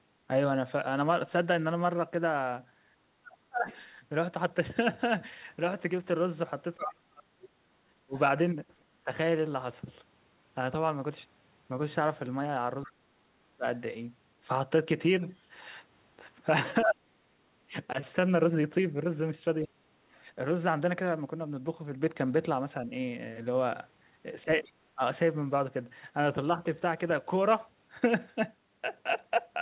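Around 3.03 to 3.68 s the talker's speech ducks hard, by about 35 dB, for roughly half a second in total. That's speech suppressed in double talk, likely the echo canceller clamping down because both ends were talking and it couldn't tell the local voice from the loudspeaker echo. From 3.69 to 8.85 s you can hear the other side's voice leaking through underneath, about 20 dB below the talker. That's residual loudspeaker echo the canceller likely failed to fully remove. The suppression hits again from 6.76 to 9.11 s, dropping by about 40 dB for around a second in total.

The leak returns more strongly from 12.84 to 19.76 s, at about 15 dB down, and a 35 dB dip lands right at its start, 12.85 to 13.65 s. From 16.85 to 26.61 s the talker keeps getting cut in pieces, about 35 dB deep, adding up to roughly a second. A fainter leak sits inside that stretch, 22.83 to 24.73 s, about 25 dB below.

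Nothing above 4 kHz comes through anywhere, which fits a narrowband G.711 A-law call at 64 kbps.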